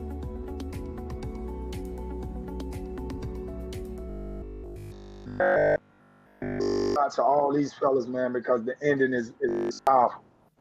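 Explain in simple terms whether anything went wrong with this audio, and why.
Audio likely arrived too slowly, so the player kept replaying its last 20 ms instead of the real material. That is robotic sound from repeated short buffers: from 4.10 to 6.96 s and 9.49 to 9.87 s, the sound becomes an almost entirely repeated, rigid metallic buzz at 50 Hz.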